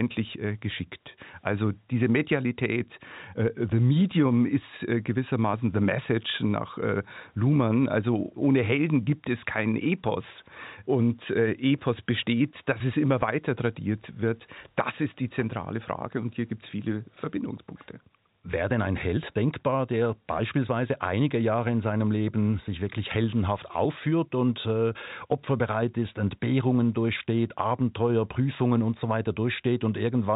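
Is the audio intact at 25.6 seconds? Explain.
Yes, the speech at 25.6 seconds is intact, carrying only the narrow telephone band of its G.711 coding, which stops at 4 kHz.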